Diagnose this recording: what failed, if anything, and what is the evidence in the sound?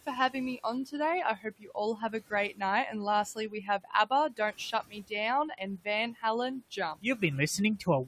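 The noise suppressor is cutting speech at the call-processing stage. In 0.06–0.93, 1.36–2.61, 3.35–5.12, 5.5–6.23 and 6.61–7.22 s, short stretches of speech drop by about 10 to 17 dB and sound swallowed. The suppressor mistook them for the room noise, which sits about 21 dB down.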